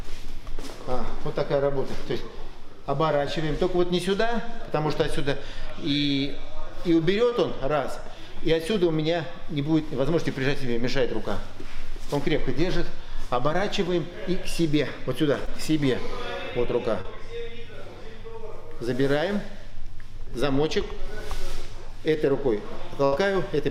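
Short concealed packet loss occurs at 7.29 to 7.33 s, 15.45 to 15.49 s and 17.01 to 17.06 s. About 20, 20 and 40 ms of audio failed to arrive in time. The receiver bridged each hole by extending the preceding sound and then blending back, which leaves a brief smear or wobble at each point.

At 23.04 to 23.14 s a burst of packet loss removes about 80 ms. Concealment sustains the last sound for about 75 ms while turning it down, giving a held, fading tail before playback resumes with that stretch missing.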